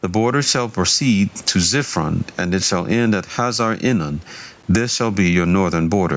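A speech recording in which the level breathes constantly: it is pulled down under each loud syllable, so quiet and loud passages sit unnaturally close together and the whole thing sounds squashed. That is gain pumping, with the level swinging by something like 15 dB, and the likely cause is microphone gain set far too high, forcing a fast limiter or compressor to clamp down on every peak and release in the gaps. The room noise sits roughly 39 dB below the speech. At 4.63 s there is a brief tick: a block of digital silence lasting 8 ms, where the audio drops out and returns with no fade. Its length fits a 128-sample block left unfilled, most plausibly an output buffer the software did not supply in time. The call-style microphone processing leaves nothing above 8 kHz.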